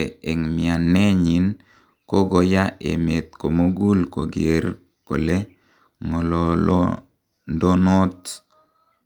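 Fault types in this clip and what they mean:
Short stall from a late packet: at 3.63 to 3.79 s, between "kogoya emet" and "kogeer kole", a packet arrived late and the jitter buffer ran dry, so the receiver held the last sound for about 23 ms, then resumed with nothing lost, leaving a brief drawn-out moment with a slight buzz or dip.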